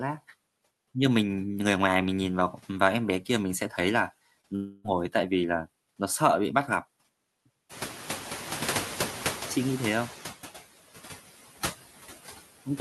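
Speech runs through with noise suppressor artifacts: background noise is pulled down by about 13 dB, dipping between phrases and rising under them. At 4.41 to 4.46 s, a short concealed packet loss fills a roughly 20 ms gap with a continuation of the preceding sound, heard as a brief smear that blends straight back in. From 4.56 to 4.91 s, a longer stretch of about 0.28 s is replaced by a fading extension of the last sound with no true silence, which points to a likely long network dropout; its length and fade set it apart from the tiny patch just before. Around 7.5 s the room noise itself jumps by about 18 dB. From 7.69 to 10.29 s the noise suppressor is catching up: the louder noise first passes with little reduction, then sinks gradually over about 2.6 s to a cut of about 8 dB. This slow settling distinguishes it from the steady frame-by-frame pumping heard elsewhere.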